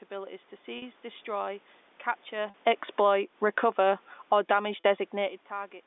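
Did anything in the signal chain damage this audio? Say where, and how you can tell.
Yes. Network stage: packet loss with pitch repetition at 0.78, 2.50 and 4.80 s. Each gap is about 40 ms, which fits two lost packets. The receiver loops the last pitch period, so the sound is briefly held and buzzy rather than silent, and that is what separates this concealment from a plain dropout.

Call processing: automatic gain falling from 2.84 to 4.56 s. The level sinks by about 12 dB, and the voice and background noise drop together. That shared drop separates it from the talker moving near 2.5 s, which changes the voice alone.

Call processing again: automatic gain rising from 3.09 to 5.21 s. The level climbs by about 5 dB over two seconds, with the room noise swelling alongside the voice. It overlaps the falling stage. The talker moving near 5.0 s shifts only the voice, so this slow joint swell is the gain control's.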